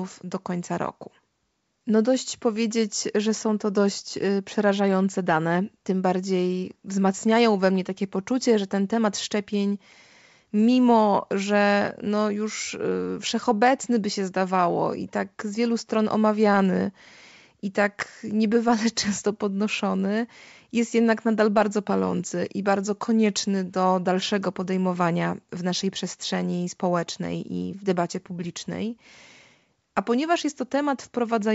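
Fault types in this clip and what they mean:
No faults are present: the speech is carried by G.722 wideband telephone coding at 64 kbit/s, which keeps its band up to 7 kHz, and the coding leaves at most a faint trace on the sound.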